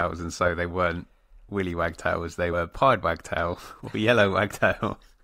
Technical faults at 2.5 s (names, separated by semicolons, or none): compressed frames skipped